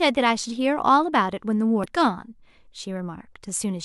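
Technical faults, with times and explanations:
1.84–1.86 s, damaged data in a compressed stream: a short run of corrupted bytes in the encoded speech stream makes the decoder misread those frames and lose sync while it hunts for the next valid frame header, producing a brief glitch lasting about 20 ms.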